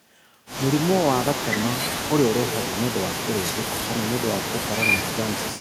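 Echo with no canceller runs throughout. Every phrase returns about a fifth of a second later, about 13 dB quieter and thinner.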